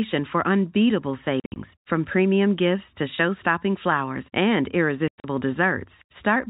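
At 1.40 to 1.56 s, between "for unbeatable" and "from premium gifts to", the speech breaks into packet loss filled with silence: 120 ms goes missing across 160 ms, the longest hole 60 ms. At 5.08 to 5.24 s, after "flowers and", 140 ms vanishes, with one 100 ms run. The holes are dead silence with hard edges, not smeared or repeated sound, and their lengths fit 20 ms packets. The narrow telephone band of G.711 runs through both.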